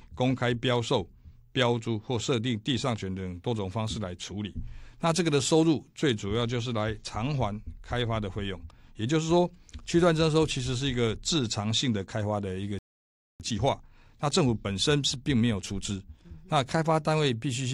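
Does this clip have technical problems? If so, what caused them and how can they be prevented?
Yes. A playback stall cuts the sound off mid-flow at 12.79 s, leaving silence until 13.40 s, about 0.61 s. The player likely ran short of buffered data or had its thread blocked. On a waveform this is a flat gap; on a spectrogram, a blank vertical band. A deeper playout buffer and a thread that other work cannot block would prevent it.

A time-compressed catch-up follows from 13.40 to 16.40 s: the player works off its backlog by trimming small pieces and cross-fading the joins, so the sound runs about 1.1 times faster at unchanged pitch. A spectrogram shows harmonics at their usual heights but events packed closer together. Preventing the stall removes the need for this catch-up.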